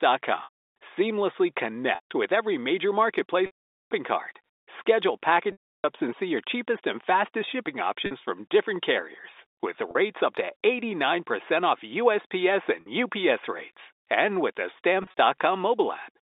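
Packet loss with pitch repetition turns up eight times: 0.44–0.56, 1.95–2.06, 3.46–3.91, 5.52–5.84, 8.06–8.11, 9.91–9.95, 12.81–12.86 and 15.03–15.19 s. Each time, the receiver loops the last pitch cycle to cover the gap. The 40–50 ms drops come across as a brief buzzy hold, while the longer ones (220, 320 and 450 ms) fade toward silence before the speech cross-fades back in. The last event is a cluster of tiny losses, none longer than 30 ms. Everything sits inside the narrow telephone band.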